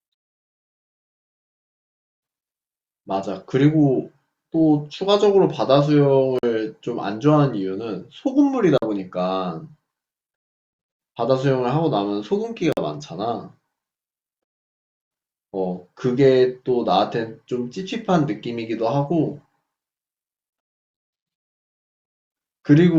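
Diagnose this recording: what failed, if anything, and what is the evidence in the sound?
The audio driver or buffer stage missed its deadlines, and the output was padded with blocks of digital silence. Holes of about 46 ms open at 6.39–6.43 s, 8.78–8.82 s and 12.73–12.77 s, with a shorter 23 ms gap at 20.50–20.53 s. The lengths fit 2048- and 1024-sample buffers left unfilled. Each dropout starts and ends abruptly, so the speech is cut by a short gap.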